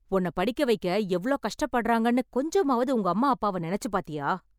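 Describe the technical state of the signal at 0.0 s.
At 0.0 s the signal is intact, with no dropout, clipping, glitch or other fault audible at that point.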